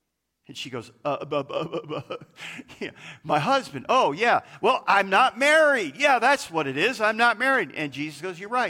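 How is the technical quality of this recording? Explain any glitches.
There are no technical glitches to explain in this speech recording. Nothing in it breaks, drops out or interrupts the audio at any point.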